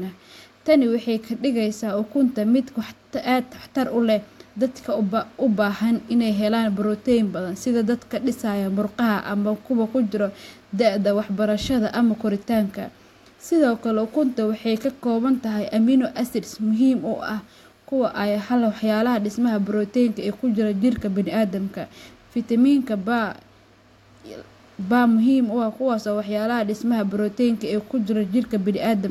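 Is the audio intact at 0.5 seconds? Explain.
Yes, at 0.5 seconds the audio is intact, with no dropout, click, distortion or other fault at that moment.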